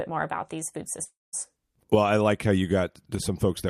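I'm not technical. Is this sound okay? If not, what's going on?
No. At 1.03 s, right after "more about these food", the speech breaks off. The last sound is stretched into a brief buzzy hiss that fades away, followed by about 0.2 seconds of silence. At 1.35 s the talking resumes, but roughly 0.3 seconds of speech is gone. This is a long network dropout. The likely cause is that the audio stopped arriving over the connection for a moment. The receiving end filled the gap with a fading smear of the last sound, then with silence, and the missing piece was never recovered.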